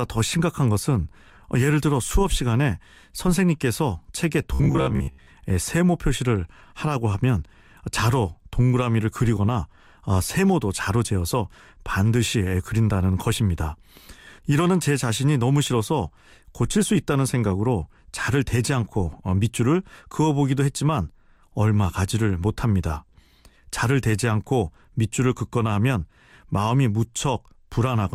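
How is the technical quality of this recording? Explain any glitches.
The recording has one glitch. From 4.54 to 5.27 s the speech turns robotic from repeated short buffers: most of that stretch is a rigid, metallic buzz near 66.7 Hz, likely caused by the playback repeating a roughly 15 ms chunk while fresh audio arrived too slowly and was skipped.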